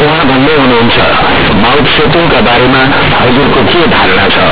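From start to finish the speech is companded audio read as linear: A-law bytes from the G.711 telephone path are played as plain 8-bit samples without expansion. Quiet and loud passages come out equally huge, so the waveform swings over about half its range as a blocky, clipped-looking slab. The spectrogram shows dense broadband smear, even through pauses. The result is harsh, buzzy distortion with loud noise between phrases.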